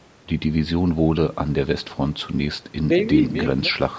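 Speech recorded through a call microphone path, with no technical faults to be heard. The call processing is working as intended: the lowest bass is trimmed and the content stops at about 8 kHz.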